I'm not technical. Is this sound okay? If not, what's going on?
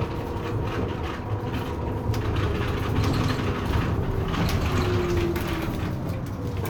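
Yes, it's fine; nothing in this sound seems wrong.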